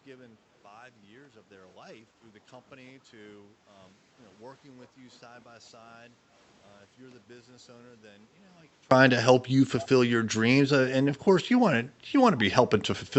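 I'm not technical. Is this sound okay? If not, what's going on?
No. From the start until about 8.91 s, the speech is very faint, as if most of it has cancelled out. The likely cause is one channel inverted: one side of the stereo signal is flipped upside down. When both sides are combined, the voice mostly disappears.

At about 2.21 to 2.32 s there is a skip ahead. Roughly a second of speech is simply missing. The talk jumps forward with almost no gap, so the two sides of the cut join abruptly.

From about 2.76 to 3.21 s, the jitter buffer speed-up makes the speech run about 10% fast. The pitch stays the same, but it sounds slightly rushed. The receiver was trimming tiny slices of audio to catch up after a delay.

Twice, at about 3.48 to 3.65 s and 6.11 to 6.30 s, the background is gated by the echo canceller. The room sound briefly dips, then comes back. The canceller turned the microphone down for a moment, expecting loudspeaker sound.

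At about 9.80 to 9.88 s, a faint, brief repeat of the voice appears, trailing about 0.22 seconds behind. This is likely an echo leak. The other side's loudspeaker sound reached their microphone and was sent back.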